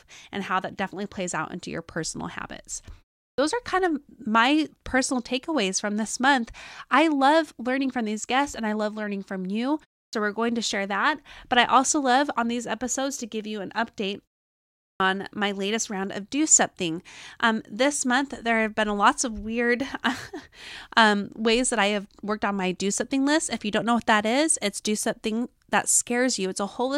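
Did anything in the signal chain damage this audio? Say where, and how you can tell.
Yes: at playback, the output device sleeps through pauses and wakes late, giving a clipped start after a pause. About 60 ms is swallowed at 3.32 s before "are kind of my", at 10.07 s before "we're going to share" and at 14.94 s before "on my latest round", so each phrase begins abruptly.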